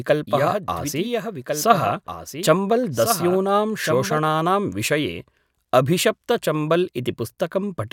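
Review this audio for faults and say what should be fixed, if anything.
Doubled audio track, from 0.00 to 4.18 s: a full-band copy of the speech trails about one and a half seconds behind, roughly 5 dB quieter, and stops abruptly, likely from a second, slower capture path. Remove the extra path so the speech is recorded only once.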